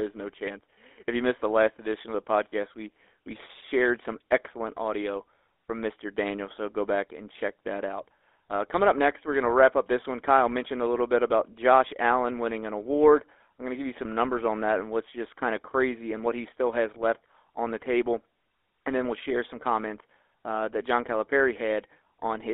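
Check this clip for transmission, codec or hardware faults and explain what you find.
Two faults are audible: GSM coding across the whole recording and one brief dropout.

GSM full-rate codec, throughout: the speech is modelled as a vocal-tract filter fed by sparse, regular pulses, which fits the 13 kbps full-rate coder. The result is a buzzy, gravelly roughness, confined to roughly 300 Hz to 3.6 kHz.

Lost GSM frames, 2.50 to 2.53 s, between "last edition of the" and "we we shared some": the decoder repeated the previous frame's settings, which fits a single lost frame. This produces a short, rough metallic ring.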